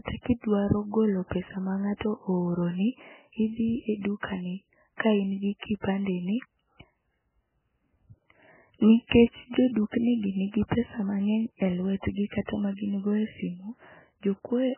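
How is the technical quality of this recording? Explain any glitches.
The recording has heavy, constant coding damage and two short pre-echo smears before sharp attacks.

MP3 compression, throughout: the speech is dull and muffled, with nothing above 3.1 kHz, and a watery, swirling texture on sibilants. This likely comes from an MP3 encoder starved of bits, which fits a very low bitrate of around 8 kbps. With so few bits, the encoder cuts the treble at a fixed point and keeps discarding weak frequency lines, so detail flickers in and out between frames.

Pre-echo, at 4.97 to 5.00 s and 9.07 to 9.11 s: each sharp onset is preceded by a brief hiss lasting 35 ms and 40 ms respectively, and the attack itself sounds softened. The codec spreads its quantisation noise across a whole block. When a sudden loud onset falls late in that block, noise scaled for the loud part leaks into the quiet moment just before it.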